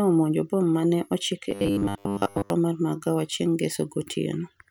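From 1.50 to 2.50 s the speech goes robotic, a stiff metallic buzz at 100 Hz, likely from a short buffer being replayed over and over, covering most of that second.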